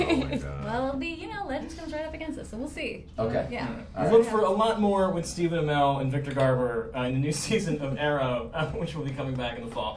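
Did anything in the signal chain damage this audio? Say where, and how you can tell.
No, nothing along the chain seems to have harmed this one, as there's nothing in it that points to a problem at any stage.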